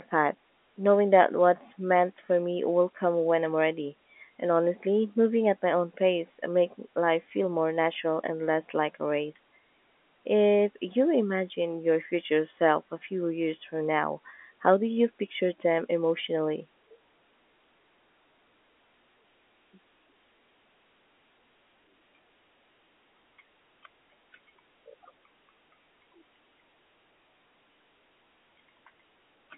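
No technical faults can be heard anywhere in the speech. It comes through a G.711 telephone path, most likely A-law, with the narrow band of a phone line running from about 250 Hz to 3.4 kHz and nothing above about 3.8 kHz.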